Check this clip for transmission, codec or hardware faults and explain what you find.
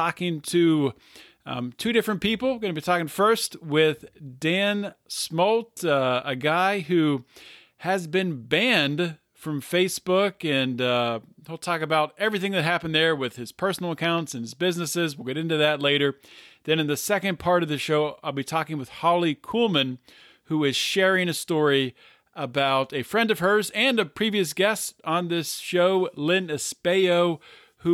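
One hardware fault is present: a loud pop at 14.04 to 14.20 s, between "there with his personal" and "and his businesses". Two sharp pops land on the speech, a few decibels above it. The cause is likely a voltage step from a plug, switch or static.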